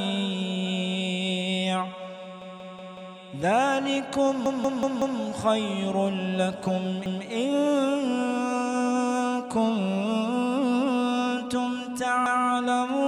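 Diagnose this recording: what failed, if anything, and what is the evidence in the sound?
The playback buffer stage failed: new audio repeatedly missed its deadline, so the device replayed the block it already held. This repeated buffer appears at 2.42–3.16 s and 4.46–5.20 s, where one piece of about 186 ms plays five times, and at 7.06–7.25 s and 12.26–12.45 s with one repeat each. Every restart is a hard join, heard as a stutter. The block length fits an 8192-sample buffer.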